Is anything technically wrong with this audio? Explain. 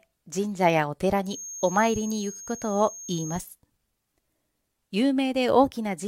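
Yes. From 1.22 to 3.47 s, a feedback whistle sits behind the speech. It is a thin, steady tone at 6.5 kHz, roughly 15 dB below the speech, swelling and fading slowly in level. The likely cause is a loudspeaker-to-microphone loop held just short of runaway feedback.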